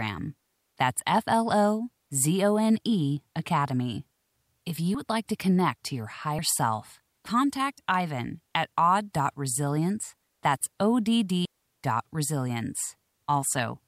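At 11.45 s a digital wireless dropout occurs: the radio link loses too much data, so the receiver mutes instead of passing corrupt audio. The speech drops into a clean, near-silent hole of about 200 ms, ending at 11.65 s, with no noise burst on either side.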